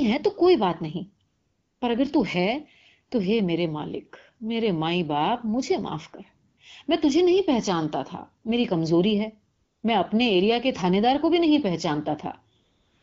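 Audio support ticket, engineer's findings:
AMR comfort noise, four gaps: 1.27–1.81 s, 6.49–6.57 s, 9.55–9.83 s, 12.59 s to end. The sending handset's voice activity detection flagged silence and stopped transmitting speech frames for 540, 80, 280 and about 440 ms. The receiver substituted synthetic noise built from a coarse level and spectrum estimate. Audible as the real background swapping to flat, smooth hiss, then snapping back. Wideband band-limited sound, light coding texture, consistent with AMR-WB around 12.65 kbit/s.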